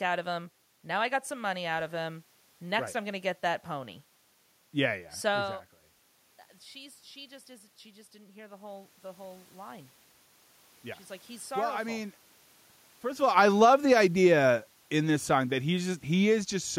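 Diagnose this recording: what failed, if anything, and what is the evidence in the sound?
The automatic gain rising fault sits in call processing. Around 5.5 s the talker moves away, and the input falls by about 15 dB. From 6.72 to 9.98 s the gain control climbs by about 5 dB. Voice and room noise swell together, slowly.

Automatic gain falling follows, also in call processing. Near 13 s the talker moves. From 13.2 to 16.63 s the gain drops by about 6 dB. The voice sinks along with its background.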